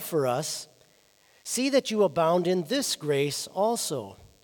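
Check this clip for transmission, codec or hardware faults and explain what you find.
DECT cordless phone buzz runs throughout: a nearby handset's radio bursts every 10 ms are rectified by the audio circuit, adding a faint, thin 100 Hz buzz rich in harmonics.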